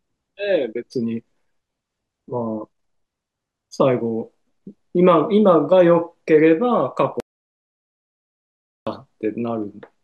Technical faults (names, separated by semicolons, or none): audio dropout to silence